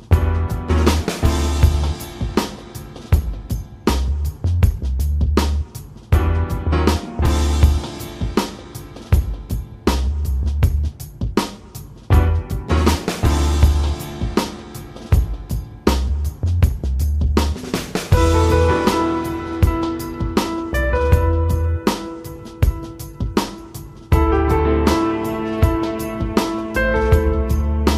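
From 12.52 s to 17.65 s, something blocks the USB bus or audio driver roughly every 1.02 s, causing periodic USB or driver dropouts. Each time, a sliver of audio around half a millisecond long is skipped outright rather than filled with silence, so the waveform jumps. About seven of these jumps fall in the stretch, each heard as an evenly spaced tick or small pop riding on the sound.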